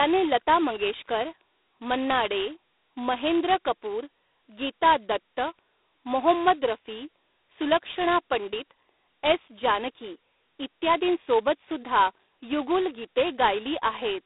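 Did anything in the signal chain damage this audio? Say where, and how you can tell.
Yes, at the codec: G.726 ADPCM throughout. The spectrogram is empty above 3.9 kHz, and a harsh hiss that follows the speech level fits 16 kbit/s.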